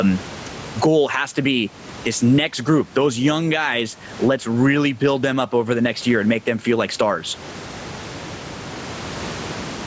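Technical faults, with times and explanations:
Throughout, gain pumping: the room noise sits about 32 dB under the speech, and the level ducks under each loud syllable, a swing of around 20 dB. That's likely mic gain set far too high with a fast limiter clamping down, squashing everything flat.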